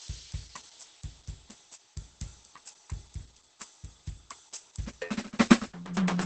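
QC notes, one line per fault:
Throughout: low-bitrate audio saved at a high bitrate. The music has nothing above 8.6 kHz, so it sounds dull and closed in. The likely cause is a very low-bitrate first encode later re-saved as high-bitrate MP3, which cannot restore the removed top end.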